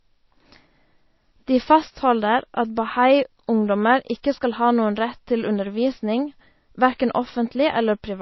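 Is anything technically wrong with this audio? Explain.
Yes, MP3 compression runs throughout: nothing above 5.8 kHz, likely a starved low bitrate, so the encoder drops weak lines, giving watery, swirly s sounds and smeared attacks.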